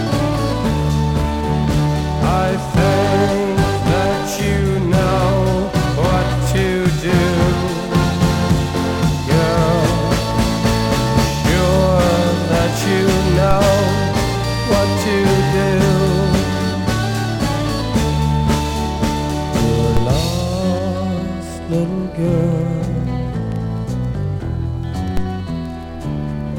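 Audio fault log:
13.51 s, 19.97 s and 25.17 s: DC step. Each is a single low thump, a dull click with body, while the sound carries on unaffected. At each moment the waveform's zero line jumps abruptly by about -6 dBFS (about -7 dBFS at the last), and that sudden offset is what you hear as the thump. The offset then drains away smoothly, as a 5 Hz high-pass would make it, so nothing lingers between the three events.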